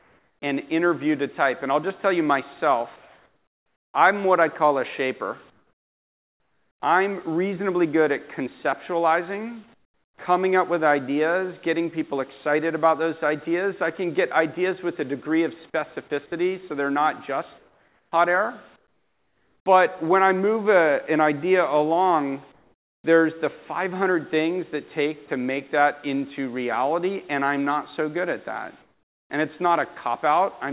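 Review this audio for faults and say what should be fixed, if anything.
Comfort noise in place of the background at 0.00–0.42, 2.96–3.94, 5.50–6.82, 9.74–10.18, 17.58–18.12, 18.76–19.66, 22.52–23.04 and 28.82–29.30 s: in each gap the real background gives way to a flat, featureless hiss, about 5 to 20 dB quieter, which then snaps back when the sound resumes. This is likely discontinuous transmission, where the sender's activity detector stops sending during quiet stretches and the receiver substitutes synthetic noise. The band-limited sound, with nothing above 4 kHz, fits a narrowband telephone codec. Disable DTX on the sending side, or lower its detection threshold, so the real background is transmitted throughout.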